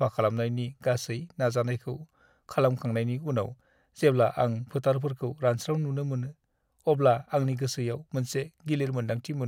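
No technical faults can be heard anywhere in this recording.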